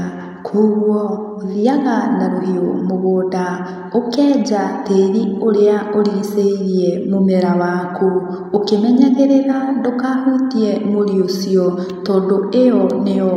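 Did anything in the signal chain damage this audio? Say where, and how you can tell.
No, nothing in the signal chain audibly damaged this speech recording, and the signal reaches the listener intact at every stage from capture to playback.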